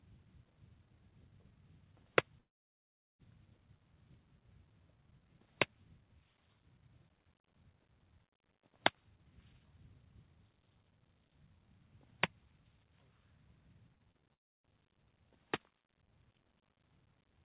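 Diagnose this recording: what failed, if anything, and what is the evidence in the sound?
Network stage, long network dropout: the sound stops at 2.4 s and returns at 3.21 s, about 0.8 s lost, and again from 14.33 to 14.65 s. A brief concealment tail decays into silence, and the audio resumes further on, likely from packets that never arrived.

Network stage, repeated packet loss (robotic sound): between 13.95 and 14.23 s, four short holes, the longest 26 ms, are each patched by extending the preceding sound. About 22% of that span is concealed, giving a choppy texture in this band-limited audio, which has nothing above 4 kHz.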